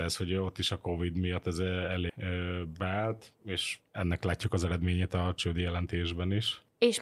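Just after "miatt ez", at 2.09 s, the speech jumps forward with no gap, joining two sides that don't follow on. This is a skip ahead: around 0.7 s of audio was discarded because later packets were already waiting, dropping the delay that much at once.

From 2.65 to 2.92 s, and again from 4.04 to 5.87 s, the speech sounds hurried but keeps its pitch, running at 113% and then 111% speed. This is jitter buffer speed-up: with too much audio queued, the receiver trimmed many short pitch-period slices, roughly 50 ms and then about 200 ms in total.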